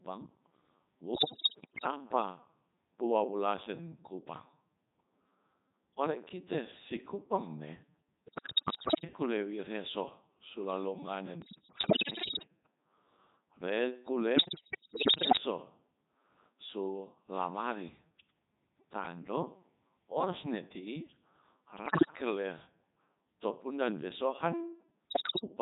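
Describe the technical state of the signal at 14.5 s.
Bit errors on digital voice radio run from 14.36 to 15.40 s. Corrupted bits, roughly 15 percent, scramble each frame's pitch, level and spectrum, so the speech warbles, bleeps and jumps. Underneath, the Codec 2 vocoder, sounding like its top 3.2 kbit/s mode, rebuilds speech from sine waves rather than the waveform, giving heavy robotic buzziness.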